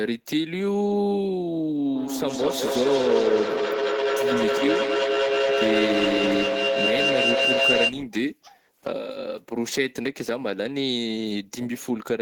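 From 1.95 s to 8.03 s there is a feedback echo between two devices: a second device in the room plays the call aloud, its sound reaches the first microphone again, and that device's echo canceller cannot remove audio it did not play itself. The speech returns roughly every fifth of a second, each pass thinner and more ringing, and because the loop gain is high the repeats build up instead of fading, peaking about 2 dB above the speech itself.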